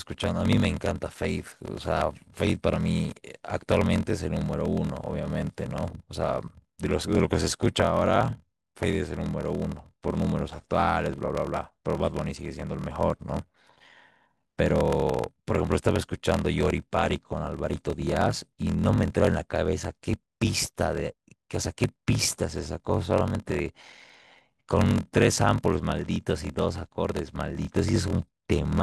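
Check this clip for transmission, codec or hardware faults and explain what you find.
There's one fault, and it runs through the whole speech clip: a block size mismatch with zero padding. One stage is handing over shorter blocks than the next stage reads, fitting 1024-sample blocks written into larger ones, and the leftover space gets filled with silence. Those tiny gaps repeat at about 41.7 Hz, so you hear a low buzz under everything, and the speech drags at 0.889 of normal speed while the timbre stays.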